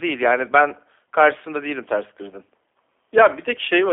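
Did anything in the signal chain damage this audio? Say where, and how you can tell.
Yes, the codec stage: throughout, the speech sounds rough and synthetic with nothing above 3.6 kHz. That is the G.729 codec's pulse-based rebuild, consistent with 8 kbit/s.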